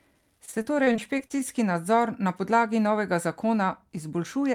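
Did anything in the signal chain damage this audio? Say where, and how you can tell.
Yes, at the network stage: repeated packet loss (robotic sound) between 0.45 and 1.41 s. Eleven short dropouts, the longest 26 ms, were patched by stretching the preceding sound over roughly a fifth of that span, leaving the speech choppy and missing fragments.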